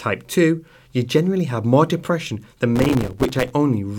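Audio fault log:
2.76–3.51 s, processor overload crackle: the speech turns gritty and crackly as the processor keeps missing its buffer deadlines, dozens of times over the stretch. Each miss drops in a sharp-edged gap of silence only a few milliseconds long, and the tearing clears once the load eases.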